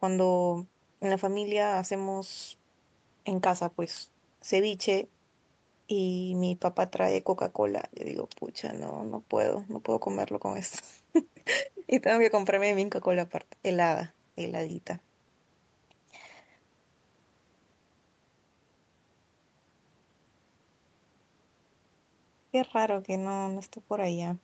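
No technical faults occur anywhere in this speech, so there are none to describe in time order.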